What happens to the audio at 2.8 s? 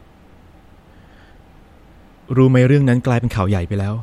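Nothing goes wrong at 2.8 s; the speech there carries on intact, with no dropout, click, distortion or other fault.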